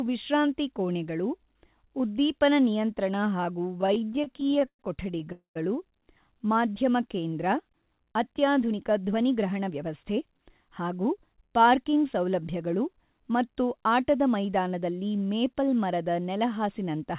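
Repeated stalls (stutter) run from 3.78 to 5.28 s. Packets kept reaching the receiver late, so its jitter buffer repeatedly ran dry. Each time, the receiver stretched the last bit of speech until more audio arrived. There are 25 of these holds, the longest 112 ms, adding about 400 ms in all and filling roughly a quarter of the stretch. Nothing is lost, but the speech drags and catches in a jerky, stammering way.

A call audio freeze follows immediately, from 5.32 to 5.57 s. The receiver likely ran out of buffered packets after a hold-up in transit and kept the final sound going as a fading buzz that drops into about 120 ms of silence. When the audio resumes, it picks up where it stopped. The result is a 232 ms pause inserted into the speech, with no content missing and the playback delay pushed back by the same amount.

A jitter buffer speed-up runs from 8.63 to 11.35 s. Too much audio had built up in the buffer, so the receiver trimmed many tiny pitch-period-sized slices to catch up, cutting about a fifth of a second in total. 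The speech plays at about 107% of normal speed while keeping its pitch, so it sounds slightly rushed. Throughout the clip the band stops at 4 kHz, which fits a narrowband G.711 A-law call path.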